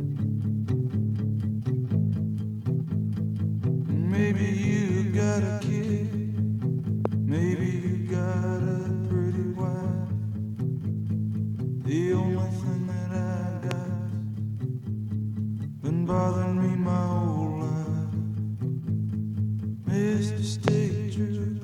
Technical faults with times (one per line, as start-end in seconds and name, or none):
7.05-7.07 loud pop
13.71-13.73 loud pop
20.68-20.70 loud pop